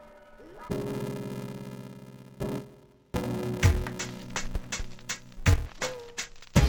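From start to finish the sound is dull and robotic, with a steady buzz at 375 Hz underneath it and no clear drop in pitch. This is interleaved audio read as planar. Each block of alternating left and right samples has its first half taken as left and its second half as right, so both channels play at half speed within every block. The blocks last about 2.67 ms, which fits a 128-sample block, and their boundaries produce the buzz.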